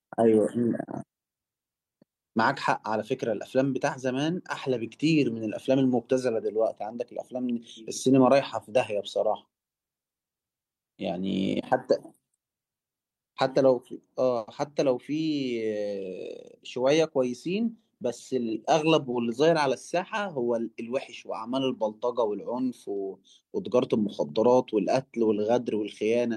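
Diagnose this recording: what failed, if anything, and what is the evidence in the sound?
Network stage: a call audio freeze at 14.37–14.49 s fills in with a fading buzz, likely stalled packets, then resumes intact, 100 ms late.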